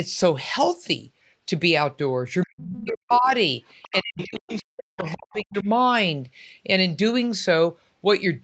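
From 2.45 to 3.3 s the speech is suppressed in double talk: the talker's level dips and breaks up, falling by roughly 40 dB at its deepest over about 0.7 s in total. The likely cause is an echo canceller that, with both sides talking at once, could not separate the talker from the loudspeaker echo and turned everything down. What marks it as suppression is that the talker's own speech thins or vanishes while no new sound appears.

At 3.67 to 3.93 s the other side's voice leaks through, a faint second voice about 25 dB under the speech. A second, longer suppression then runs from 3.91 to 5.68 s, with about 1.5 s affected and drops near 40 dB. Within it more leakage appears: 4.18 to 4.62 s, louder at about 15 dB below the speech, and brief scraps at 5.02 to 5.13, 5.32 to 5.37 and 5.58 to 5.64 s, each about 25 dB down. This is likely loudspeaker sound the canceller failed to remove from the microphone. 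Unlike suppression, the leakage adds a separate voice rather than taking the talker away. Throughout, the call path's 8 kHz upper limit is audible as expected.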